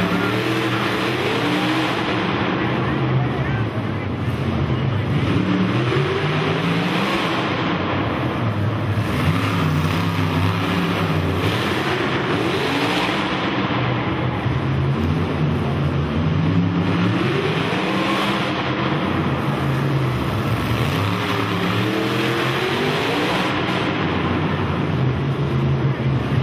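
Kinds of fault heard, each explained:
frames out of order: Adjacent blocks of coded audio reached the decoder swapped and were played that way, so at 5.14, 8.49, 14.10 and 23.48 s a stretch plays with its halves exchanged (about 46 or 186 ms each), a garbled flutter.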